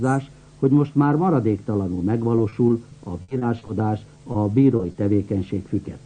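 At 1.99 to 2.01 s there is a short concealed packet loss. About 10 ms of audio never arrived in time, and the receiver covered the hole by extending the preceding sound before blending back into the real signal. It leaves a brief smear rather than a break. From 2.38 to 3.69 s the sound turns choppy. This is repeated packet loss (robotic sound): nine separate holes, the longest 60 ms, together about 15% of the stretch. Each one is patched and then followed soon after by the next, so the artificial continuations pile up into the robotic texture. A single loss is too brief to produce that. Two more isolated short concealed packet losses follow, at 4.15 s (10 ms filled) and at 4.32 to 4.35 s (20 ms filled). Each is heard as a small smear or wobble with clean audio on both sides, which is what separates it from the clustered kind. Between 4.76 and 4.95 s the robotic quality returns in a tighter burst of four gaps, the longest 30 ms. 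About 37% of this short span is synthesised, so although it is brief, the sound there is densely broken up.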